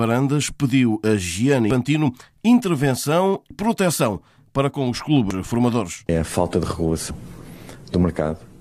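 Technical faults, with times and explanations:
1.71, 3.51, 5.31 and 7.11 s, audio missing between chunks: at each of these points about a fifth of a second of sound vanishes and the two sides butt together with no silence, so it is heard as a sudden skip rather than a gap. The regular 1.8 s spacing points to recording in 2 s chunks that likely loses a short piece at every handover. Unlike a dropout, nothing goes quiet, and unlike random packet loss, the skips keep strict time.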